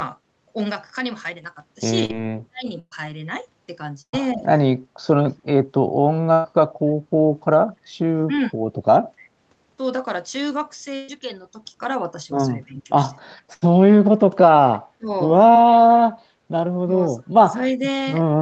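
At 2.05 s and again at 15.53 s, short concealed packet loss leaves a brief smear of about 40 ms and then 20 ms. The decoder stretched the last sound across the gap, and it is too short to fade into a buzz.

From 2.22 to 2.68 s the voice is speech suppressed in double talk, dropping very deeply, by roughly 40 dB, for about half a second. Shallower dips follow at 4.35, 8.29, 12.66 and 14.98 s, and from 16.86 s to the end. Each dip is likely the echo canceller turning down the talker while the far side speaks. The voice is ducked, not replaced.

Bursts of packet loss at 2.79, 4.01, 6.33, 10.96 and 13.54 s each remove about 120 ms, or 80 ms at 13.54 s. The concealment sounds as a held buzz or a fading hiss, with silence at 2.79 and 4.01 s. The audio then resumes further along, with that stretch gone.

At 9.20 s a very faint echo leak returns a copy delayed by 290 ms. This is a repeat of earlier sound, unlike a dropout.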